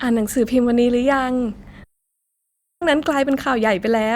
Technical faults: long network dropout

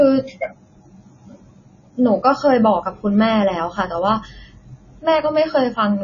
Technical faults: MP3 compression

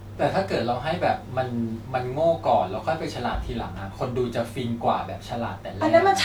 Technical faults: none

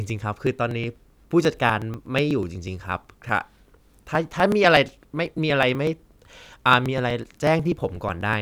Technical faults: periodic USB or driver dropouts

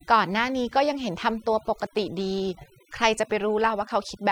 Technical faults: overdone noise removal

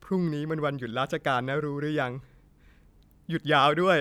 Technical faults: none

